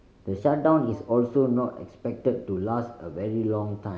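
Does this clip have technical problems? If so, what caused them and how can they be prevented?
Yes. From 0.38 to 0.92 s the speech suddenly runs about 5.8% fast and rises nearly a semitone in pitch (97 cents), then snaps back to normal speed and pitch. This is a drift correction step, likely caused by clock-matching software that, instead of adjusting gradually, changed the playback rate in one jump to drain or refill its buffer. Speed and pitch moved together because the samples were simply played faster. Preventing it means using a drift correction that resamples in small, continuous adjustments rather than abrupt rate steps.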